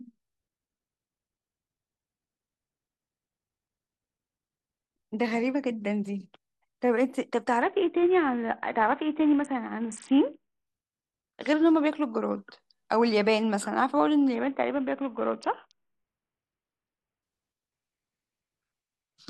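From 7.62 to 10.66 s and 14.35 to 17.23 s, a Bluetooth SBC bit pool drop starves the upper sub-bands, dulling treble and adding grit, consistent with roughly 54 kbps.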